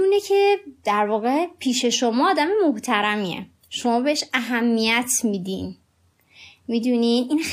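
No technical faults are audible.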